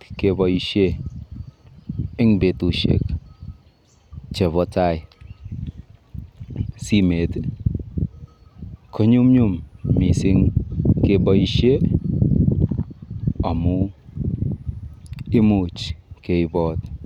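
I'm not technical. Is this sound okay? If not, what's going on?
Yes, the recording is technically sound, with nothing in the signal that points to a problem in how it was captured or delivered.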